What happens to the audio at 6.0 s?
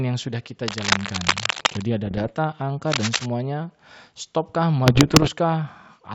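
Nothing goes wrong at 6.0 s; the speech carries on intact through the G.722 wideband coding, with at most the faint upper-band hiss of that codec.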